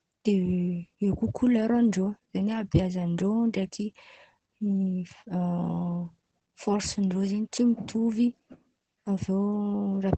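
Opus voice compression runs throughout this speech clip, with plainly audible damage. Nothing survives above about 8.8 kHz, so the sound is band-limited to wideband and loses its airy top. The SILK linear-prediction coder models each short stretch with a coarse excitation, which makes the voice sound muffled, hoarse and faintly robotic. That degree of damage fits a low bitrate of around 12 kbps.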